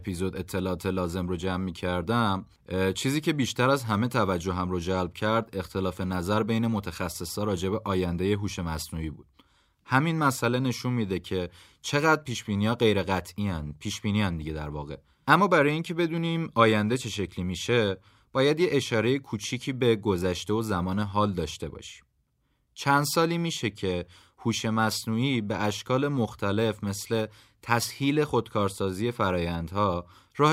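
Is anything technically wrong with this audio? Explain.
No, nothing technically wrong can be heard in this speech recording.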